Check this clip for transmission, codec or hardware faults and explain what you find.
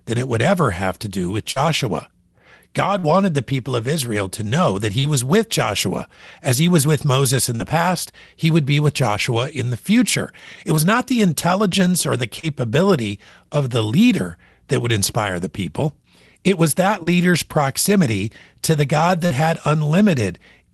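One fault runs through the clip: short concealed packet loss, at 1.51, 2.99, 4.99, 7.55, 12.40, 17.03 and 19.26 s. It comes through a call codec path whose band stops near 12 kHz, which points to Opus.

In each event about 40 ms of speech failed to reach the decoder in time. The receiver covered the hole with 32 to 44 ms of audio extrapolated from the preceding sound, then crossfaded back. Each one is heard as a brief smear or warble. Unlike a plain dropout, there is no silent gap and no hard click.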